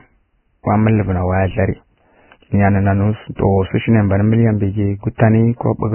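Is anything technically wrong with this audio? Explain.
Yes, there are two faults. Throughout, the speech sounds hissy and grainy, with nothing above about 3 kHz. This is likely heavy Vorbis compression at a very low bitrate, around 10 kbps, where the treble is quantised so coarsely that fine detail turns into noise.

At 5.18 s, just after "mbǝ ghi", there is pre-echo. The codec spread its quantisation noise across the whole transform block, so a brief hiss lasting about 18 ms precedes the sharp onset, and the attack sounds smeared.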